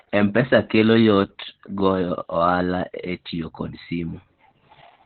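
From start to end the speech carries Opus voice compression at a low rate, which fits roughly 8 kbps in SILK mode. The band is cut to narrowband, with nothing above about 4.3 kHz, and the coarse excitation coding leaves the voice muffled, hoarse and faintly robotic.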